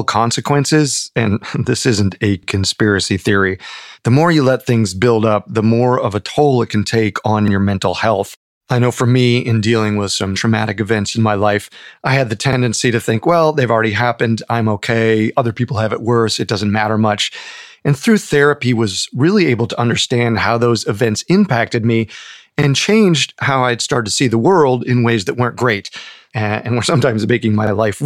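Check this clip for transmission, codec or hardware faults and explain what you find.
There is one fault: overlapping chunks at 2.43, 7.48, 12.53, 17.58, 22.62 and 27.67 s. Chunks of about 5 s each replay roughly 48 ms at every join, giving a regular stutter in the speech, visible as a duplicated waveform segment with a vertical discontinuity on the spectrogram.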